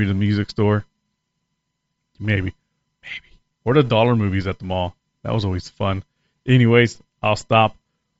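Throughout the speech, a breathy, grainy edge sits on the upper band. This is likely Bluetooth LC3 compression, where noise replaces starved high frequencies, fitting a low bitrate.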